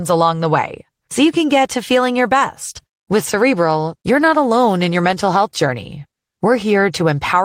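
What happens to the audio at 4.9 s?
At 4.9 s the speech carries on cleanly, with no dropout, click, distortion or other fault at that point.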